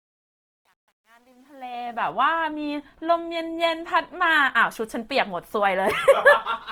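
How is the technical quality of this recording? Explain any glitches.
The recording has two clear faults, both audible in the speech.

Truncation distortion on a fade affects the fade-in from the start to 2.11 s, and is worst up to 1.66 s. The gain stage quantised without dither, which fits roughly 10 bits. The quiet opening sounds gritty, and the waveform shows stair-stepped squares.

Throughout, the sound is rough and grainy. Spectrogram bands look noise-filled, though content reaches about 20.2 kHz. The likely cause is Opus compression in CELT mode, at a rate that fits about 24 kbps.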